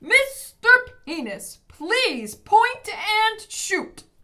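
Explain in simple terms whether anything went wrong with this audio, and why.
Nothing went wrong here.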